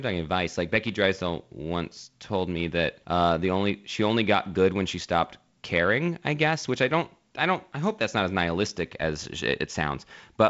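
No technical faults can be heard in this recording.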